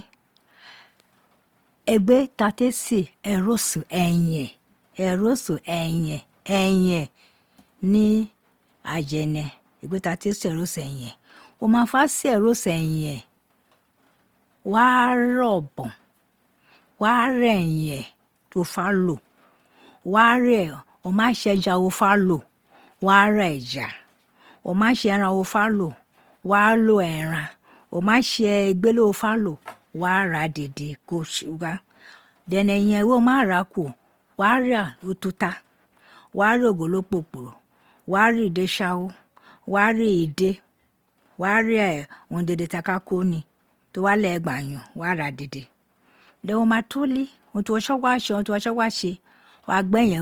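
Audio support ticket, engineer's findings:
Speech grainy and rough throughout, with a noisy edge on sustained tones; few spectral holes, little swirl. Bandwidth intact to about 20.3 kHz. Likely cause: Opus compression in CELT music mode, at a rate that fits 24 kbps. Band energies kept, starved bands filled by folding or noise.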